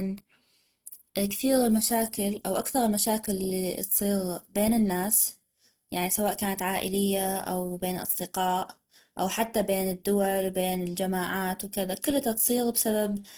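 Throughout the speech, Opus compression damage is plainly audible: the sound is grainy and rough, with a hissy, noisy texture where tonal detail should be, rather than the swirling of MP3. This likely comes from Opus in its music (CELT) mode at a low rate, fitting about 16 kbps, filling starved bands with folded or noise content. A spectrogram would show energy reaching about 20.2 kHz with few holes, but the upper bands look smeared and speckled.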